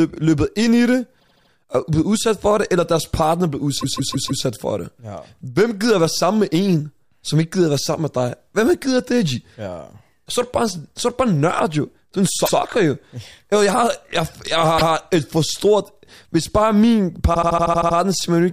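Repeated frames stutter the speech five times. At 1.19 to 1.50 s, between "ind i det" and "er blevet udsat for", a 78 ms block plays four extra times. At 3.80 to 4.43 s a 157 ms block repeats four times. At 12.45 to 12.55 s, after "er en", a 105 ms block plays once more. At 14.77 to 14.93 s, between "har jeg jeg" and "et for stort", a 157 ms block plays once more. At 17.33 to 17.96 s a 78 ms block loops eight extra times. In each case a short run of compressed frames was sent again, so the decoder replays the same slice of audio. Together the repeats lengthen the audio by about 1.8 s.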